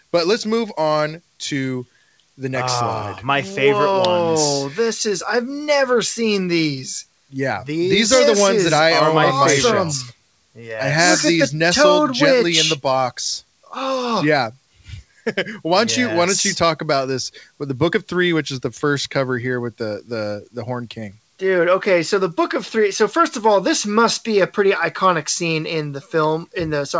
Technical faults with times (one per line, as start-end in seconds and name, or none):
14.75-15.21 sound cut by the noise suppressor